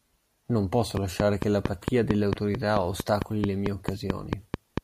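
From 0.97 to 4.79 s, a train of clicks ticks steadily at 4.47 per second, likely interference, seen as evenly spaced waveform spikes and vertical spectrogram lines.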